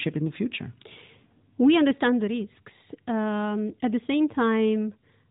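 Nothing's wrong here: it's a short bit of speech coming through an ordinary narrowband mobile phone codec, and there's nothing in it that calls for a fix.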